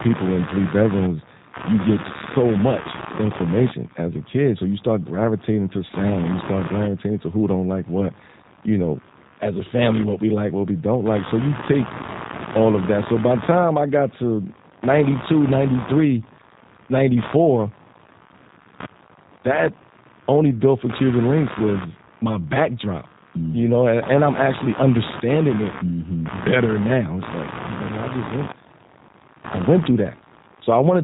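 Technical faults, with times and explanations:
Throughout, computer activity noise: a buzzing, scratchy pulse train repeating at roughly 70 Hz sits around 15 dB below the speech, rising and falling independently of it. Processor or peripheral load is disturbing the audio circuit's shared ground, injecting that interference.
Throughout, G.729 codec: the speech sounds rough, slightly synthetic and plainly damaged, with nothing above 3.8 kHz, which fits an 8 kbit/s G.729A coder. It rebuilds each 10 ms frame from a vocal tract model, pitch prediction and sparse pulses, discarding fine detail.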